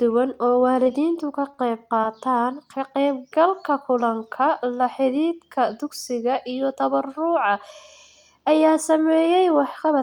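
Just after "duwan oo", from 0.73 to 2.05 s, scattered short gaps appear: about five lost or late packets, none longer than roughly 20 ms, each patched by continuing the previous sound. Unlike one long dropout or true silences, these are brief ticks and smears.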